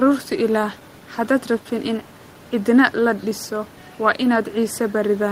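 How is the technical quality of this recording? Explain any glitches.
Nothing stood out on listening; the only thing beneath the speech is the room's own background noise, sitting about 22 dB lower.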